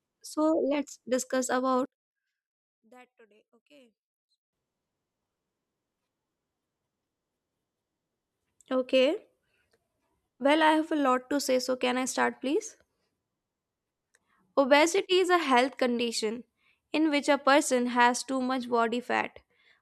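From 1.85 to 4.53 s the speech drops by about 30 dB to a faint copy. The likely cause is one channel inverted: with one side's polarity reversed, the centred content cancels when the channels are summed to mono, leaving only the faint difference between them. On a waveform this shows as a sudden narrow band over those seconds, and a spectrogram shows that stretch dim.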